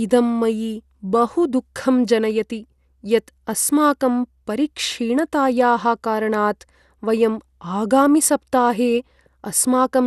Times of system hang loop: none

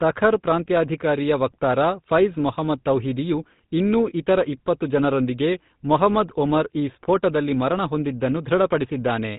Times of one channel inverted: none

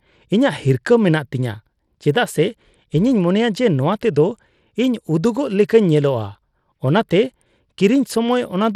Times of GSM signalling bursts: none

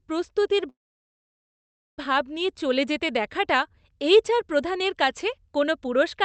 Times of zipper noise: none

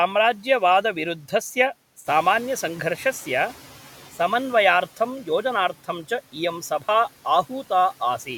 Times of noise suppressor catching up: 2.06-3.74

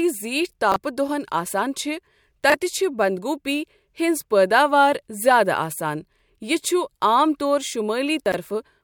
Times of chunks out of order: 0.72-0.76, 2.50-2.54, 8.26-8.34

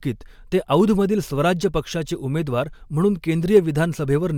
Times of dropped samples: 0.80, 2.16, 3.57

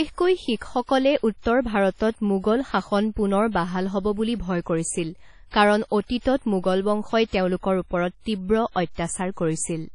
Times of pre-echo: 0.56-0.61, 5.49-5.54, 6.20-6.25

